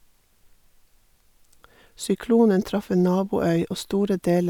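No technical faults can be heard anywhere in this speech recording. There is no moment in it that needs a timestamp or an explanation.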